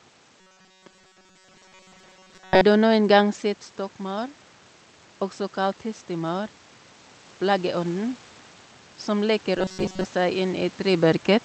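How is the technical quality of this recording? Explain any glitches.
The recording has two kinds of glitch. A robotic buzz appears twice, and the level swells near the end.

Robotic sound from repeated short buffers happens from 0.40 to 2.62 s, and again from 9.58 to 10.05 s. The sound turns into a rigid, metallic buzz at 188 Hz. It still follows the speech loosely. The likely cause is new audio arriving too seldom. The player fills the gaps by repeating a very short piece, which fits a repeat length near 5.3 ms. Most of the real audio in those stretches is skipped.

Automatic gain rising runs from 9.06 to 11.16 s. The level climbs by about 3 dB. Speech and room noise swell together over about two seconds. The gain control judged the input too quiet and turned it up gradually. This rise overlaps the second stretch of buzz. Near 11 s, a shift in the talker's distance from the microphone also changes the level.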